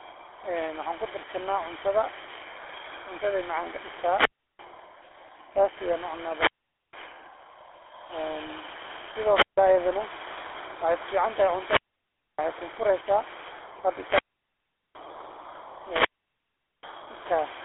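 The whole recording carries GSM full-rate codec damage. The speech sounds buzzy and gravelly, which fits the original 13 kbps mobile coder. It passes a telephone band of about 300 Hz to 3.4 kHz. Nothing reaches above 3.8 kHz, so sibilants sound dull.

From 3.87 to 4.84 s there is a wireless microphone squelch dropout. The FM signal fades, hiss rises, and the receiver mutes for about 340 ms. A second, shorter dropout runs from 9.28 to 9.58 s, with a hole of about 155 ms before the sound returns.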